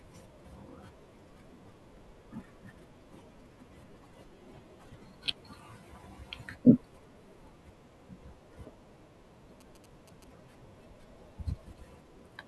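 From 9.61 to 10.24 s, GSM signalling bursts: a nearby 2G phone's radio pulses, rectified by the audio circuit, give galloping ticks and 217 Hz buzz, roughly 20 dB under the speech.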